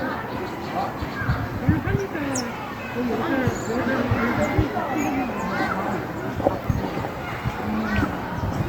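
Nothing technically wrong turns up anywhere in this recording of sounds, so there's no problem to point to.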